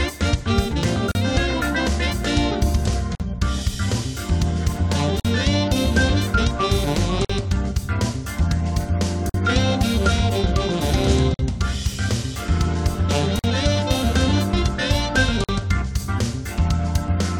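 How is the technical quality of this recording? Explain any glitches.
The recording has a recurring technical fault: a gap at a join of encoded pieces at 1.12, 3.15, 5.20, 7.25, 9.30, 11.34, 13.39 and 15.44 s, roughly every 2 s. The audio was encoded in separate chunks and joined without trimming each run's start-up delay and end padding. Each join leaves a smeared hole in continuous sound, 36 ms at the first and 48 ms at the rest, after which the sound resumes where it stopped.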